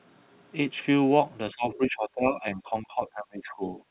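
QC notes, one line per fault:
1.53–3.78 s, speech suppressed in double talk: the talker's level sinks in stretches totalling about two seconds, dipping by about 20 dB at its deepest. This is likely an echo canceller that could not separate the near talker from loudspeaker echo while both sides spoke, so it attenuated everything.
1.71–1.78 s, other side's voice leaking through: a brief 70 ms fragment of a second voice sits about 20 dB under the talker. The likely cause is residual loudspeaker echo that the canceller failed to subtract from the microphone. Like the rest of the audio, it is band-limited to 4 kHz by the G.711 mu-law path.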